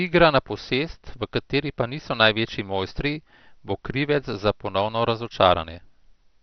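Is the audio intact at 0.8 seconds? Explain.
No. At 0.8 seconds, as throughout the speech, the sound is dull, with nothing above about 6.2 kHz and a gurgling, granular roughness. This is likely heavy MP2 compression at a low bitrate, fitting about 48 kbps, which shuts off upper sub-bands and coarsely quantises the rest.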